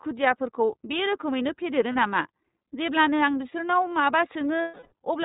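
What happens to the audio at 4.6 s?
Lost iLBC frames from 4.62 to 4.93 s: about 300 ms went missing, and the decoder filled the gap by repeating the last pitch cycle mixed with noise, so it sounds like a held, slightly buzzy vowel. The gap length fits roughly ten 30 ms frames. Because each frame decodes independently, the voice returns right after. The iLBC codec is present throughout, including this moment. It cuts everything above 4 kHz and gives the speech a plainly audible rough, synthetic edge, which fits its 13.33 kbps mode.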